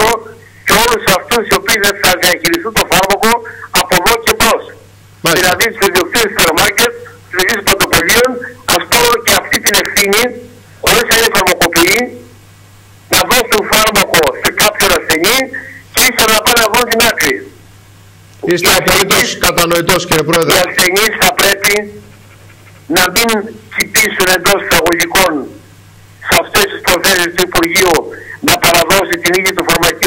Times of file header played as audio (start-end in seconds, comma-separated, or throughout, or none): none